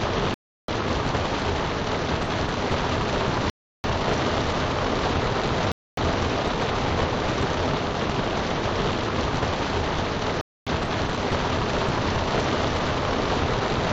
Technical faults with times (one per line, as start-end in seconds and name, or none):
0.34-0.68 block of digital silence
1.68 damaged data in a compressed stream
3.50-3.84 block of digital silence
5.72-5.97 block of digital silence
10.41-10.67 block of digital silence